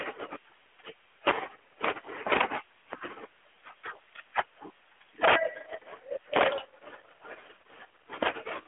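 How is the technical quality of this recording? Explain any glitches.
The recording has six integer overflow cracks on loud speech peaks. It carries the band-limited sound of a mobile call, with nothing above about 3.8 kHz and light AMR-NB codec colouring that fits a 12.2 kbps narrowband link.

Integer overflow occurs at 1.27–1.31 s, 2.32–2.41 s, 2.93 s, 4.39 s, 6.36–6.48 s and 8.23–8.29 s. Peaks driven past the integer ceiling, by up to about 16 dB at 2.32 s, wrap to the opposite extreme rather than being limited. They snap across the full range as harsh cracks far sharper than clipping.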